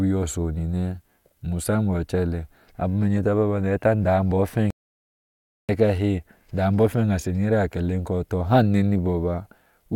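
A playback stall runs from 4.70 s to 5.69 s in this speech clip, cutting the sound off in mid-flow for nearly a full second, about 0.98 s, before it resumes. The silence is abrupt at both edges rather than a fade, which points to the output having nothing to play. The likely cause is the player running out of buffered data, or its audio thread being blocked, so no samples reached the output until it caught up.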